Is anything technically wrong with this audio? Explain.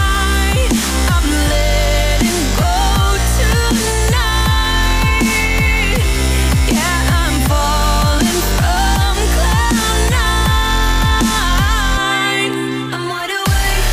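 No, the signal holds steady throughout, with no audible technical faults anywhere in the audio.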